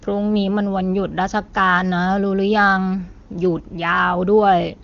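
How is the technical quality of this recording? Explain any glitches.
No glitches to report: the speech comes through an AMR wideband (HD Voice) path with nothing above 7.3 kHz, and the coding quality fits the codec's top 23.85 kbit/s mode, with at most faint coding traces.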